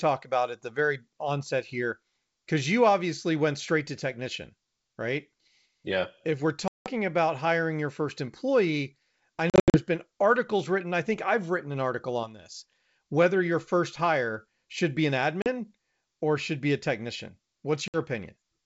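Packet loss on an ADPCM call cuts hard-edged silent holes into the wideband G.722 speech at 6.68 to 6.90 s (180 ms gone), 9.50 to 9.79 s (180 ms in scattered gaps, the longest 80 ms), 15.42 to 15.47 s (40 ms) and 17.88 to 17.98 s (60 ms). Unlike a clean dropout, the sound comes back with brief slight distortion, because the decoder's predictor and step size have drifted from the sender's. It settles within tens of milliseconds.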